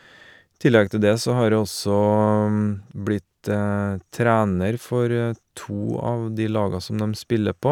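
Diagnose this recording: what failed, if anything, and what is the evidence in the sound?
Nothing failed; no audible technical fault in this speech.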